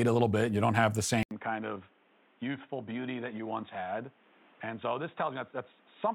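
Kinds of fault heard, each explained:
Input switched to a poorer device: after an 80 ms gap at 1.23 s, speech drops about 10 dB, loses all above 3.8 kHz, gains background noise, likely a device change.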